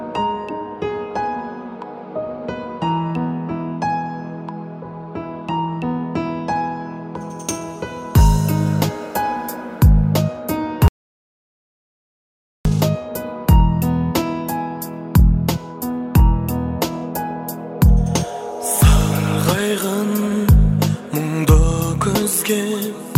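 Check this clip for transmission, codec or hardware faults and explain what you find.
One fault stands out. From 10.88 to 12.65 s there is an audio dropout to silence, lasting about 1.77 s. The sound stops abruptly and resumes mid-flow. The gap is silent, with no room tone. The input was likely lost while recording continued writing silence.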